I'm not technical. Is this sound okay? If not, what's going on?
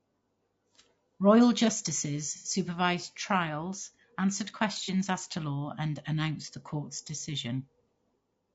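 No. Throughout the clip the speech sounds rough and grainy, with a hiss between the tones of the voice and a thin, artificial-sounding top end. Low-delay AAC compression, the kind used for video calls, is the likely cause. It chops the sound into very short pieces, so it captures voice detail poorly.

There are also two AAC frame losses with concealment, one from 2.36 to 2.49 s and another from 4.85 to 4.90 s, just after "trials answered" and before "as to law and". Small chunks of audio went missing, and the decoder patched each gap by reusing the last good sound, which leaves a brief smeared, noisy blip.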